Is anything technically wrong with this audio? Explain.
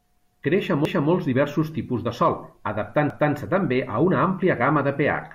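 Yes. The speech shows overlapping chunks: the audio was handled in blocks of about 2 s, but each new block began 250 ms before the previous one finished, so that stretch is played twice at each join. This happens from 0.85 to 1.10 s and again from 3.10 to 3.35 s. At each join, a quarter-second of speech repeats, heard as a stutter or click where the blocks meet.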